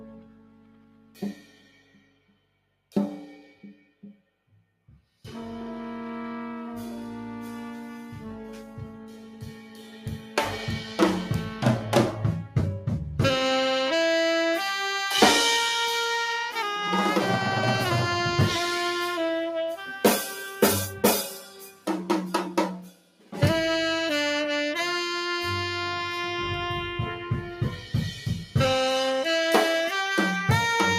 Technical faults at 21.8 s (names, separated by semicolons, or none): noise suppressor applied to music or sounds; sound cut by the noise suppressor